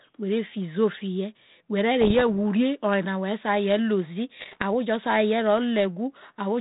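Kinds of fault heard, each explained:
Bit errors on an ADPCM link: flipped bits derail the decoder's step size and predictor, giving rough bursts near 2.0 and 4.4 s, seen as broadband smears and jagged waveform spikes.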